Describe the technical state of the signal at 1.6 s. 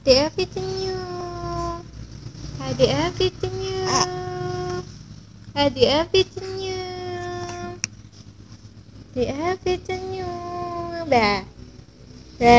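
At 1.6 s the signal is intact, with no audible dropout, distortion, glitch or other fault at that moment.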